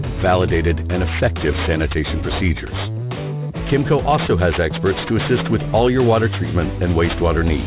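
From start to finish the audio carries aliasing. The content folds around 4 kHz, which fits a drop to an 8 kHz sample rate with no filtering beforehand. Energy that belonged above that point reappears mirrored below it, at unrelated pitches, as a gritty, metallic haze sitting roughly 15 dB under the main signal. A clean band-limit would just sound dull. Here the spectrum runs full right up to 4 kHz and carries false tones.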